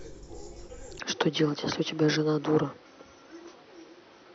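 At 0.99 s the input likely switched to a poorer device for the rest of the clip. The speech abruptly loses everything above 6.1 kHz, sounding duller and about 5 dB quieter, with a faint new background noise far below it and no gap at the switch.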